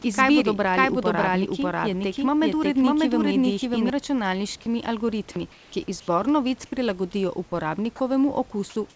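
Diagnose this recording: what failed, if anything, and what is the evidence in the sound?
A second copy of the signal is mixed into the call-processing or capture stage, most likely from a slower second capture path or an edit that left two takes out of step. This is a doubled audio track. From the very start until 3.9 s, just before "računalniškimi algoritmi ki", the speech is accompanied by a full-band duplicate trailing by roughly 0.7 s at about the same level. It has no reverberant tail or room colouring, and it stops abruptly at 3.9 s.

The sender's discontinuous transmission in the call-processing stage cuts the real background during pauses, and the receiver substitutes comfort noise in place of the background. The likely cause is a voice detector judging these gaps as silence. The first gap runs from 5.52 to 5.72 s (200 ms), right after "računalniškimi algoritmi". The second runs from 6.00 to 6.08 s (80 ms), between "računalniškimi algoritmi ki" and "novic prilagodijo". 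In both, the textured room noise turns into flat, featureless hiss, about 1 dB and 2 dB quieter respectively.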